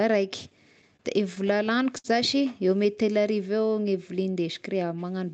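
From 0.81 to 2.06 s you get repeated stalls (stutter): about eight short hitches where late packets drained the buffer and the last sound got stretched, the longest around 60 ms, over the call path's 8 kHz-limited Opus sound.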